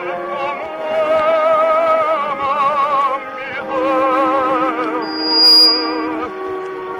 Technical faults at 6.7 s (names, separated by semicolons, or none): none